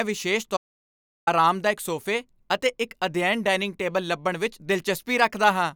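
At 0.57 s an audio dropout to silence cuts the speech for 0.7 s. The input was likely lost. Dead silence fills the gap until "ਅਰਾਮਦਾਇਕ ਸੋਫੇ ਅਤੇ ਇੱਕ" at 1.27 s.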